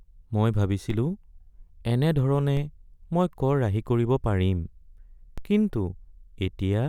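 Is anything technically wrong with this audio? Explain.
Yes. A DC step occurs at 0.90 s, 2.57 s and 5.38 s. Each time, the waveform's zero line abruptly jumps by about -24 dBFS and then drains away through a roughly 5 Hz high-pass, so each event is a brief low thump under the continuing speech.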